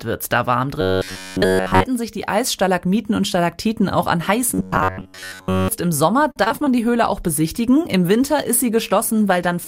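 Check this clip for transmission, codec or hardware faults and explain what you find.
Three kinds of fault turn up, all in the transmission path.

Robotic sound from repeated short buffers, 0.81–1.85 s and 4.54–5.68 s: a rigid metallic buzz at about 94 Hz sits on the sound. That pitch points to roughly 10.7 ms chunks being replayed, likely a playback buffer starving. Virtually everything is repeats in the first stretch, most of it in the second.

Repeated packet loss (robotic sound), 6.31–6.68 s: five gaps in quick succession, the longest 45 ms, patched by stretching the previous sound. About a third of that span is concealment, so it comes across choppy and robotic, with bits missing.

Call bitrate drop, 7.05 s to the end: the encoder falls from 96 to 25 kbps and stays there for the last 2.6 s or so. Coarser coding at that rate makes the sound rougher and duller, losing top-end sparkle.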